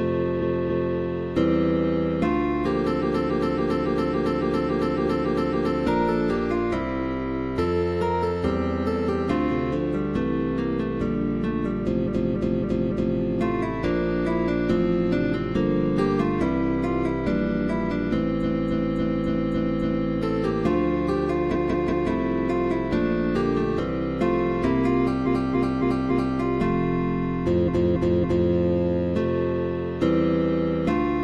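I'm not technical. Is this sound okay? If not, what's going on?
No. It has repeated frames: a chunk of about 0.28 s replays back to back, like a stutter, at 0.38–0.93, 2.98–5.76, 12.03–13.15, 18.39–20.07, 21.51–22.06 (shorter chunk, about 0.19 s), 25.22–26.34 and 27.64–28.47 s. Unlike a dropout, nothing goes missing. The same bit plays again, so the audio runs longer.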